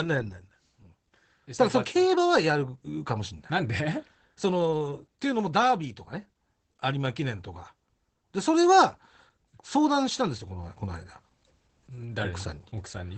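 Speech with Opus voice compression throughout. Nothing reaches above 8.4 kHz, so it sounds muffled. Coarse SILK coding adds hoarse, slightly robotic damage, which fits about 12 kbps.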